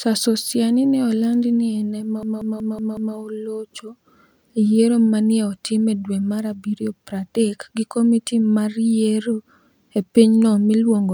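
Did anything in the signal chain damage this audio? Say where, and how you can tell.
Yes: from 2.23 to 3.16 s, just after "eni ema", one 186 ms fragment stutters like a machine gun, repeating five times at about 5.4 Hz. This is a system hang loop at the driver or buffer stage, where the hardware kept replaying a stalled ring buffer. The loop length fits an 8192-sample buffer.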